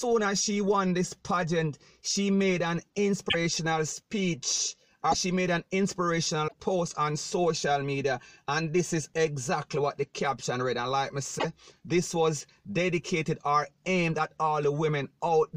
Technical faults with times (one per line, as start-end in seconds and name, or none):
3.28-3.35 broken MP3 bit reservoir
5.11-5.15 broken MP3 bit reservoir
6.47-6.54 broken MP3 bit reservoir
11.38-11.45 broken MP3 bit reservoir